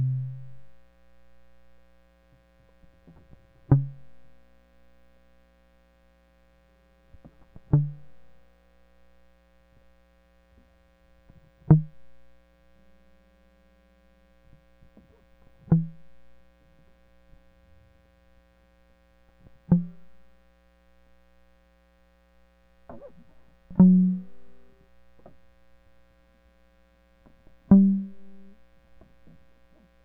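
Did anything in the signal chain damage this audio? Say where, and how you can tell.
No, nothing in the signal chain audibly damaged this music; the signal holds steady at every stage from capture to playback, with no audible trace of any fault.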